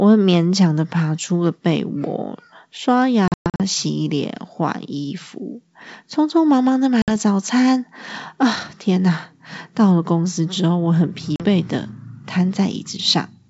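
Packet loss on an ADPCM call at 3.28–3.61 s (about 240 ms of gaps, longest 120 ms), 7.02–7.11 s (60 ms) and 11.36–11.43 s (40 ms): silent holes, then slightly distorted speech as the decoder's predictor resynchronises, over clear wideband G.722 sound.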